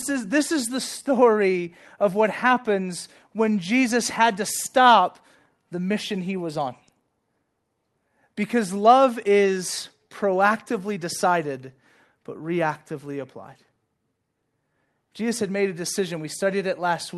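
Clock drift between sender and receiver runs through the whole speech clip. The sender's clock is slower by roughly 3 percent, so the receiver's jitter buffer keeps draining and has to be topped up to avoid running dry, which leaves a faintly unsteady pace.

Repeated timing corrections follow from this from 0.09 s to 17.16 s. The receiver keeps stretching the audio by repeating short pieces, playing it at about 97 percent speed and adding about half a second overall. These uneven insertions come across as slight hiccups and a dragging tempo over the Opus call path's 12 kHz band.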